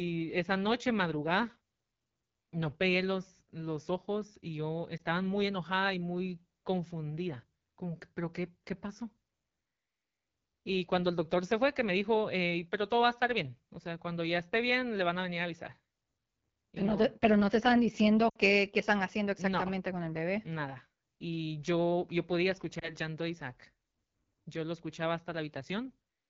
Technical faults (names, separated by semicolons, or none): AMR wideband (HD Voice) codec; lost AMR speech frames